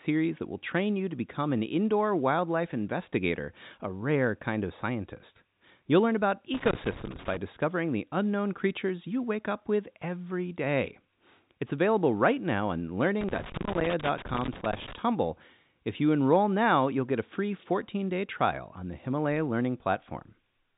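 From 6.54 to 7.37 s, after "learn about" and before "discovering the unknown creatures", and again from 13.21 to 14.98 s, after "available right now on", there is loose connector crackle. A worn contact rapidly makes and breaks, chopping the telephone-band speech into irregular scratchy bursts, unlike evenly spaced dropout clicks.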